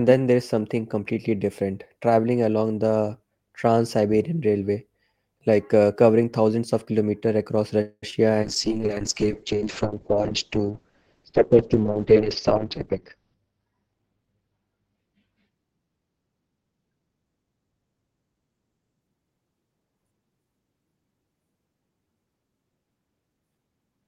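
Call audio freeze, 7.81 to 8.04 s, right after "thousands of kilometers across": the sound stalls, stretching the last moment into a fading buzz for about 210 ms, ending in roughly 40 ms of silence. The likely cause is delayed packets draining the jitter buffer. Nothing is lost; the audio resumes where it stopped, just later.

Short concealed packet loss, 8.10 to 8.14 s: about 40 ms of audio is gone, and the receiver papers over only around 17 ms by extending the preceding sound before blending back. The result is a brief smear with a tiny jump forward, trimming the delay by roughly 20 ms.

Call bitrate drop, 8.44 to 19.07 s: the encoder was forced to code far more coarsely as the bandwidth estimate fell, consistent with a drop from around 32 kbps to 6 kbps. Highs above 6 kHz vanish, the audio turns muffled and watery, bottoming out for about 5 s.

Jitter buffer speed-up, 12.20 to 14.17 s: with excess audio queued, the receiver repeatedly cut out tiny pitch-period slices, about 200 ms in total. 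The sound runs at 111 % speed without any pitch change, giving a noticeably hurried delivery during that stretch.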